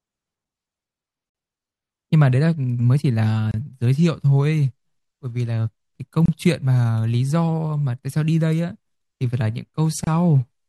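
At 1.30 s, 3.51 s, 6.26 s and 10.04 s the speech drops into brief silence, about 51 ms at the first join and 27 to 29 ms at the rest. These are gaps at joins of encoded pieces: segments were encoded separately and butted together untrimmed, so encoder start-up delay and last-frame padding remain as dead air. Each gap has smeared edges, and the speech resumes exactly where it stopped.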